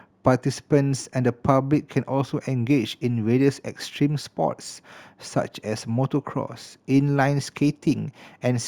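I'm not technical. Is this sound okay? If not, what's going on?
No. The recording was converted to a higher quality setting by simply connecting the dots between samples, a rough shortcut that causes imaging from linear upsampling. What you hear points to a step from about 16 kHz to 44.1 kHz. It dulls the crispest part of the speech and leaves faint ghost copies of it from 8 kHz to 16 kHz. Throughout the clip, this adds a light metallic shimmer on hissing sounds like s and sh.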